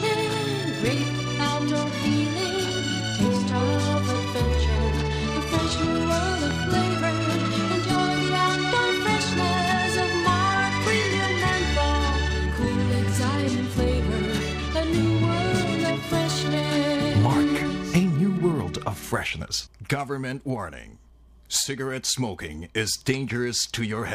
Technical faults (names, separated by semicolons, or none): loud pop